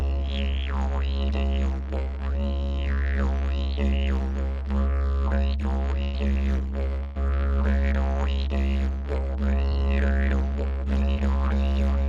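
A recording of everyday sounds carried over a WebRTC call path, its top end stopping near 12 kHz as fits Opus at around 32 kbps, has two bursts of packet loss, at 6.03–6.15 s and 7.03–7.17 s. In each, the receiver stretches the last sound and fades it out over roughly 100 ms and 120 ms respectively. The audio then jumps ahead, with about 100 ms and 120 ms of real sound gone. Two short concealed packet losses follow at 9.69–9.73 s and 11.13–11.18 s, where about 20 ms never arrived. The decoder patches each hole with a brief extrapolation of the preceding sound before blending back, leaving a short smear or wobble in which any brief transient can vanish.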